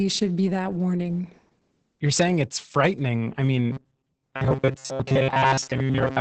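Opus voice compression runs throughout: speech-oriented linear-prediction coding at what sounds like about 10 kbps strips everything above 8.8 kHz, leaving the speech muffled and hoarse. Robotic sound from repeated short buffers starts at 3.72 s, after "saying it's frightening I", and continues to 6.20 s. A rigid, metallic buzz near 133 Hz likely comes from replaying 7.5 ms chunks in place of most of the missing audio.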